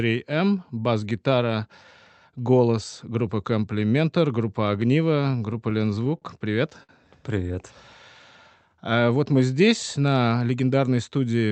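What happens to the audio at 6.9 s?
From 6.83 to 6.91 s there is a short stall from a late packet: the jitter buffer ran dry, so the receiver stretched the last speech sound for about 58 ms until the packet arrived. Nothing is lost, but that sound is held with a faint buzzy dip.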